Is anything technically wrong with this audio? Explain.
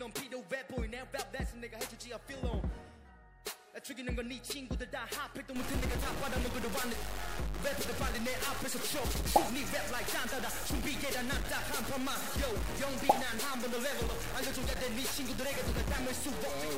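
Yes. From 5.56 s to the end, the audio carries harsh, buzzy distortion typical of a stuck bit, likely from a broken data line or converter forcing one bit to a fixed value. Samples jump by a step of about -35 dBFS, so quiet passages fill with noise.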